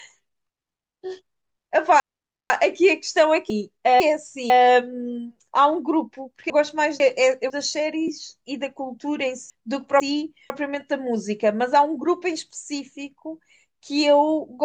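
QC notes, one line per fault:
0.5 to 10.5 s, chunks out of order: Four spots where the audio jumps around. From 0.5 to 2.5 s, a 500 ms piece shows up three pieces late. Then at 3.5 to 4.5, 6.5 to 7.5 and 9.5 to 10.5 s, a 500 ms piece gets swapped with its neighbour. Nothing goes missing, it just plays in the wrong order, so each spot sounds like a jumbled hiccup at the hard joins where unrelated bits of the waveform butt together.
8.08 s, AAC frame loss with concealment: A very short blip, about 10 ms, which fits a single dropped frame from the low-delay AAC stream. That stream is likely AAC-ELD at 64 kbps, which itself adds only light coding damage here. The decoder patches the gap by reusing the last good spectrum, so there's no dropout to silence. Instead you get a tiny smeared, phasey spot.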